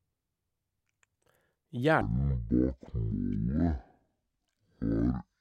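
A speech clip that goes wrong from 2.01 s to the end: it's a case of stereo read as mono, with the interleaved left and right samples taken as one channel, so playback drops to half speed, an octave low, plus a faint mirrored image up high.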